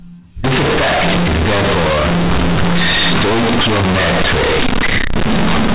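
From 0.44 s to the end at 5.74 s, companded audio read as linear: mu-law bytes are played as raw 8-bit samples, so pauses roar as loudly as speech, unlike plain clipping.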